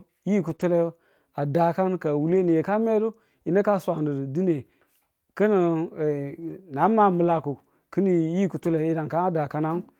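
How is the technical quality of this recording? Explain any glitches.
The speech is marred by repeated brief packet-loss damage.

Lost packets rebuilt from error correction at 0.47–0.53, 0.59–0.61, 2.27–2.53, 6.41–6.51, 7.23–7.37 and 8.57–8.75 s: the decoder played low-bitrate backup copies, so these stretches sound rough and noisy. On a spectrogram they show smeared, grainier harmonics, with no gap.

Short concealed packet loss at 0.55–0.59 s: about 20 ms never arrived, and the decoder extrapolated the preceding sound, giving a brief smear. On a waveform it appears as a short stretch continuing the preceding sound before blending back into the real audio.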